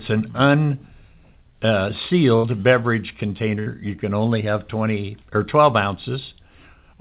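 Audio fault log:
2.36–2.46 s and 3.60–3.68 s, burst of packet loss: each time the speech smears into a brief held, fading tail and then jumps ahead. A short run of call packets arrived too late or not at all, so the receiver stretched the last sound and faded it, for about 75 ms and then 64 ms, while about 80 ms and 60 ms of the speech were skipped. The band-limited, 4 kHz-capped call sound carries on either side.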